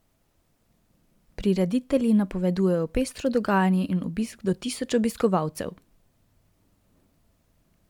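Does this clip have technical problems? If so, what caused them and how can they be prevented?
No, this clip has no technical problems, so there is nothing to trace to a cause or prevent.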